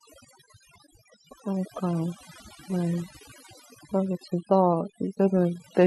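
Across the whole speech clip, a noise reduction stage set far too aggressively is cutting individual frequency bands whenever they sit near its noise estimate. The result is overdone noise removal: near-silent gaps sprinkled with twinkling specks, and a voice whose quieter components vanish.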